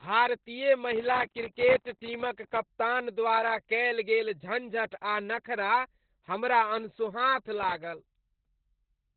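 From start to finish the speech sounds muffled, hoarse and faintly robotic, with nothing above about 4.4 kHz. This is heavy Opus voice compression: its SILK coder has narrowed the band and coded the excitation coarsely, which fits a bitrate around 8 kbps.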